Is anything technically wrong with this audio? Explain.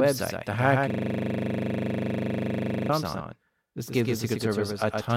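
Yes, two faults are audible.

A doubled audio track runs through the whole recording: a second full-band copy of the speech trails the original by about a tenth of a second, at about 5 dB lower. It has no reverberant tail or room colour, so it sounds like a hard slapback rather than an echo. The likely cause is the same signal being captured twice, once through a slower path. On a waveform, every syllable onset is repeated a fixed distance later. On a spectrogram, each event appears as an identical duplicate.

From 0.9 s to 2.89 s there is a system hang loop. The computer or driver stalled while the audio hardware kept replaying one 40 ms section of its ring buffer, cycling it about fifty times. Because the loop is so short, it is heard as a steady buzz at 25 Hz rather than a stutter, and the speech stops for those two seconds. The waveform shows an exactly periodic block. The spectrogram shows vertical striping every 40 ms, with a frozen spectral shape that starts and ends abruptly.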